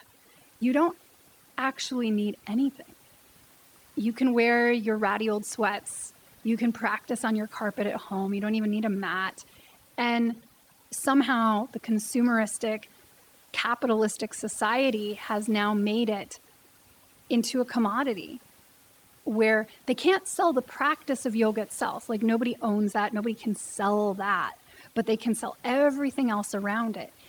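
Overdone noise removal runs through the whole speech clip, from start to finish. The noise reduction was pushed too hard, so any frequency band sitting close to its noise estimate gets pulled far down or switched off outright. The room noise, sitting about 35 dB below the speech, is reduced to near silence speckled with twinkling artefacts, and the quieter parts of the voice are stripped away with it.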